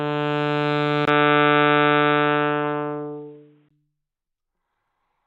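An input switched to a poorer device, from 1.05 s to 3.71 s, in a recording of everyday sounds. A 20 ms gap opens at the change, and then everything above 3.8 kHz vanishes, so the sound turns dull and boxy and shifts by a few decibels. A faint new noise floor sits far beneath it. The likely cause is a change of microphone or a headset's narrow call profile mid-recording, with full bandwidth returning at 3.71 s.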